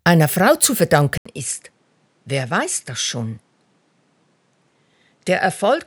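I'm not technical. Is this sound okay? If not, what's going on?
No. At 1.18 s the input likely switched to a poorer device. After a brief gap, the sound turns duller and a bit quieter, with faint new background noise.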